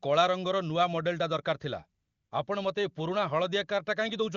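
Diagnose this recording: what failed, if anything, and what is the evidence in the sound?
AMR comfort noise failed at the call-processing stage. From 2.01 to 2.31 s, the real background vanishes for 0.3 s and smooth, steady hiss replaces it. The phone judged the talker silent and stopped sending speech frames. The receiver synthesised noise from a coarse level-and-spectrum sketch.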